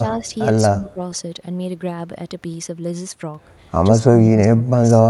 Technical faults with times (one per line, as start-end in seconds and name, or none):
0.16-0.26 speech suppressed in double talk
0.70-1.00 speech suppressed in double talk
3.91-4.68 speech suppressed in double talk
4.93-5.05 speech suppressed in double talk